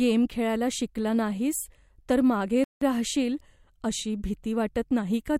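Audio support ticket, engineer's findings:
Playback stall, 2.64–2.81 s: speech cuts to silence for 173 ms after "शिकला नाहीस तर मागे", resumes at "राहशील अशी भीती". Likely player buffer underrun or blocked audio thread.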